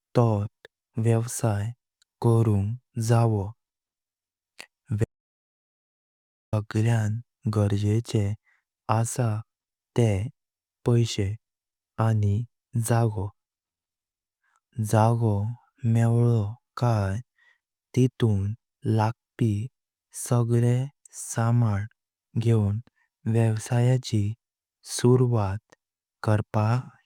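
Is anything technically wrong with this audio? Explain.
Yes. From 5.04 s to 6.53 s the speech cuts out into an audio dropout to silence lasting about 1.48 s. The cut is abrupt at both ends, and the gap is silent with no room tone, so whatever was spoken there is gone. The likely cause is the input being lost for that moment while recording continued and filled the gap with silence. A natural pause would leave some background hiss.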